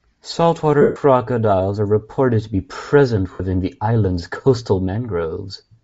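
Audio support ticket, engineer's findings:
Breathy, grainy edge on the speech for the full clip; upper band thinned and replaced by hiss-like texture, damage plainly audible. Probable component: encoder, likely Bluetooth LC3 compression at a low bitrate, consistent with about 32 kbps in 7.5 ms frames. The encoder zeroes much of the upper spectrum and noise-fills it, which produces the grain.

Noisy smear at 0.81–0.96 s, about 0.14 s long; sound turns to grainy wash and fades toward silence near the end. Probable component: Bluetooth link, lost LE Audio frames, fits roughly 19 consecutive 7.5 ms frames. The decoder repeats the last spectrum with randomised signs, then attenuates it.

Shorter smear at 3.33–3.40 s, about 0.07 s, between "reported to be present" and "the island's coastal". Same mechanism, lost LE Audio frames, about nine frames concealed.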